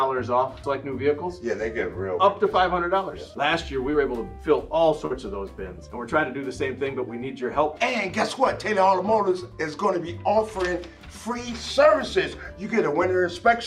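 At 3.91 to 3.95 s a brief smear briefly blurs the sound; this is short concealed packet loss, where about 20 ms never arrived and the receiver extended the preceding audio. At 5.05 to 5.13 s the sound stretches into a held, fading tail and then jumps ahead, a burst of packet loss in which about 40 ms went missing, was filled by a decaying continuation, and a few milliseconds were skipped on resuming.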